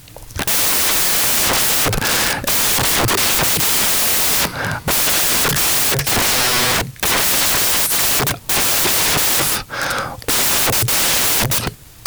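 From start to finish, the reader assembles each sample from the wrong bytes, misaligned or in swapped order, so the rapidly changing low bits land in the high part of every value. The speech comes with loud, harsh broadband noise, close to white on the louder sounds.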